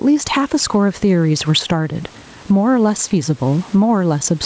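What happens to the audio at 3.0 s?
Gain pumping is present at 3.0 s, as it is throughout the clip. The likely cause is input gain set far too high, with a fast limiter clamping down on each loud syllable. The gain swings by around 10 dB, leaving the speech squashed.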